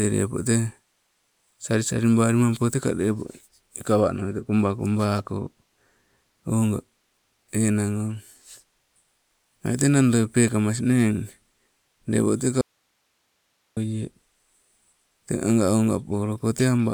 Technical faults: audio dropout to a faint residue

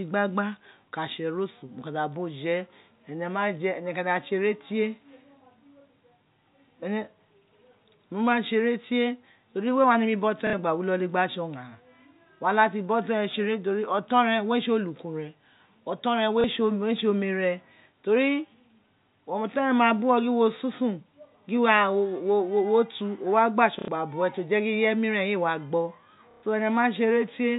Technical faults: packet loss with last packet repeated

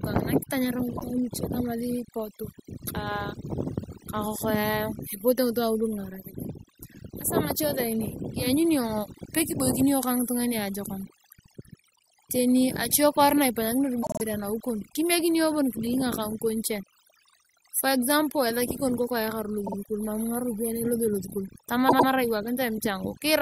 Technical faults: overdone noise removal; repeated frames

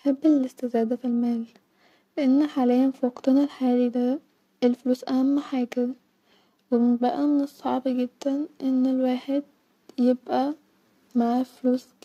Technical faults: periodic clock jitter

